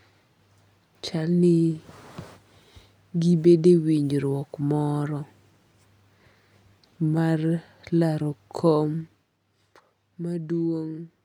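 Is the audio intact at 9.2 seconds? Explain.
No. Just after "laro kom", from 8.97 to 9.41 s, a fine ticking zips across the speech as it drops by roughly 10 dB. This is zipper noise: the level falls in unsmoothed 2 dB steps, about fifteen a second, each clicking.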